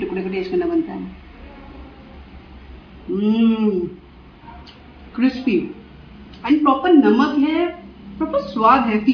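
No technical faults can be heard anywhere in the clip.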